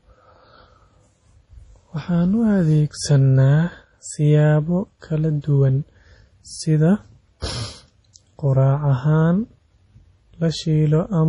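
MP3 compression runs throughout the speech, from start to finish. Nothing is heard above about 10.6 kHz, and the heavy damage suggests a low bitrate, which fits something near 32 kbps. It is likely that the encoder ran short of bits, cut the treble at that fixed point and dropped weak frequency lines that flicker on and off between frames. The result is a watery, swirling texture, metallic chirps on s sounds, and smeared consonant attacks.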